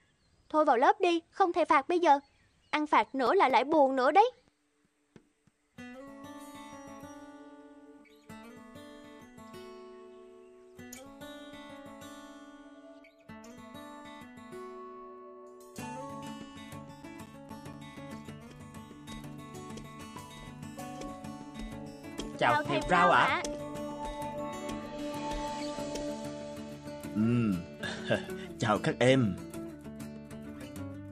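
CD scratch ticks appear from 2.8 to 4.44 s and again from 16.56 to 18.43 s. In both bursts, a blemish on the disc wipes out more data than error correction can restore, once per revolution, and the player patches or mutes the gap. The first burst gives eight brief ticks, the longest only a few milliseconds. The second gives nine, the longest near 10 ms, almost heard as tiny dropouts. Each arrives at roughly five per second.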